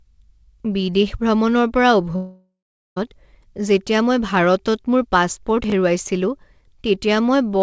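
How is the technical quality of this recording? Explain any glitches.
The recording has two glitches, one long gap and one brief jumble, heard through a call path whose G.722 coding leaves nothing above 8 kHz.

From 2.16 to 2.97 s, just after "বিদেশ ভ্ৰমণৰ পৰা", the speech turns into a fading continuation of the last sound, then about 0.4 s of near silence, and resumes with material missing. This is a long network dropout, likely caused by about 0.8 s of audio never arriving while the receiver stretched the last sound.

At 5.64 to 5.72 s there is a garbled moment: chunks out of order. A 20 ms chunk played three chunks late, creating hard joins.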